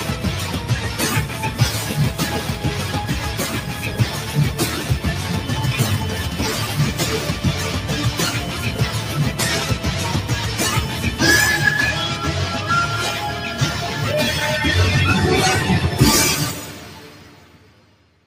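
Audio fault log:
Throughout: noise suppressor applied to music or sounds. A suppressor designed for speech stays active and treats sustained tones, ambience and decaying tails as noise. It lets onsets through, then pulls the level down as each held sound continues, by about 5 dB. The result is pumping: attacks mostly get through, the sustain sinks behind them, and the texture loses body between transients instead of ringing out naturally.
5.29 to 14.53 s: feedback whistle. A thin, steady tone at 3 kHz sits around 20 dB below the main sound for just over nine seconds, swelling and fading slowly in level without building up. The likely cause is a loudspeaker-to-microphone loop running right at the edge of feedback, so the gain around the loop at that one frequency is just short of runaway. The tone sustains itself instead of swelling into a howl.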